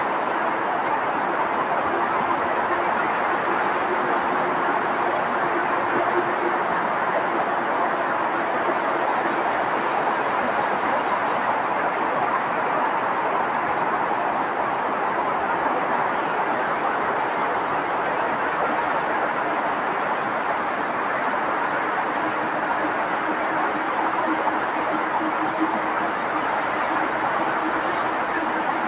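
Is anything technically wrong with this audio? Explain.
No, nothing is technically wrong here; the audio carries nothing above 4 kHz, which fits a narrowband G.711 call path working as expected.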